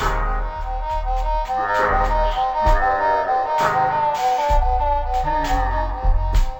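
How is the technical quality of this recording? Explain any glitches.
Poor: the whole recording runs slow and sunk an octave low, a stereo read as mono fault present from start to finish. Everything plays at half speed, 12 semitones below where it belongs, and a fainter mirrored copy of the sound sits in the upper half of the spectrum. The left and right samples, stored alternately, have been taken one after another as a single channel, so each moment of audio occupies twice as many samples as it should.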